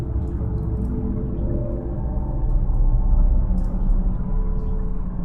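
No audible technical faults.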